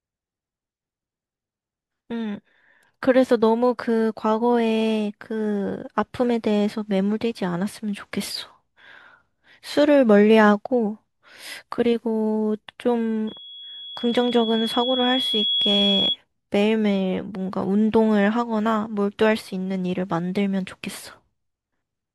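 A microphone picking up its own loudspeaker causes loudspeaker feedback squeal from 13.27 to 16.17 s: a 3.4 kHz tone swells over about two seconds to roughly the speech's level.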